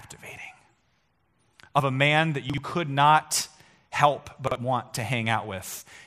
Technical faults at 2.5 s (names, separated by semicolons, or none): chunks out of order